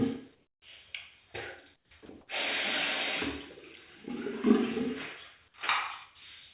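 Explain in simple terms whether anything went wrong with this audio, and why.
A couple of things went wrong. From 0.35 to 0.62 s and again from 1.76 to 1.91 s, the real background turns into flat, quieter hiss. That's comfort noise in place of the background, likely from the sender pausing transmission during quiet stretches.

Then from 2.06 to 2.09 s a brief bit of sound vanishes into that same steady noise. That's sound dropped by the voice detector, which likely mistook it for background.

The call link itself cuts everything above 4 kHz, so the audio sounds a bit narrow throughout.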